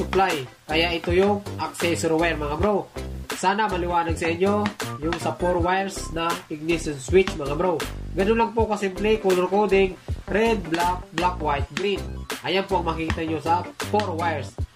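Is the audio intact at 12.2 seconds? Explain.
Yes, the audio is intact at 12.2 seconds, with no dropout, glitch or other fault at that moment.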